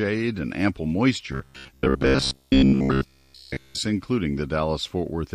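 From 1.32 s to 3.78 s, just after "and ample", the speech collapses into robotic sound from repeated short buffers: a rigid, metallic buzz near 66.7 Hz that loosely tracks the phrasing. The likely cause is audio arriving too slowly, with playback looping a roughly 15 ms fragment in place of the missing signal through most of that stretch. A waveform shows identical cycles tiling every 15 ms. A spectrogram shows evenly spaced harmonics locked at 66.7 Hz.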